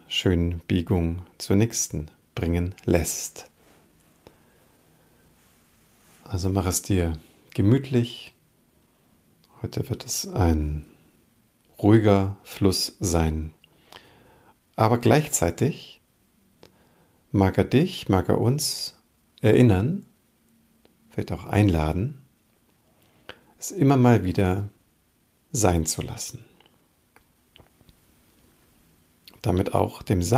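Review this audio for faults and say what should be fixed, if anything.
Clock drift between sender and receiver runs through the whole clip. The sending side's clock runs fast, by about 4 percent. Audio therefore arrives slightly quicker than the receiver plays it out. The jitter buffer keeps filling beyond its target. The receiver has to shed material to keep its delay in check. This mismatch is the root of the timing corrections across the recording.

Repeated timing corrections run from 0.27 s to 30.22 s. The receiver trims short pieces out of the stream over and over. Every edit goes the same way, removing sound rather than repeating it. The spacing between cuts is uneven. Each cut is small. Together they give an effective playback speed of 104 percent.

To prevent this, lock both ends to a common clock, or resample adaptively at the receiver so drift is absorbed smoothly instead of by cutting.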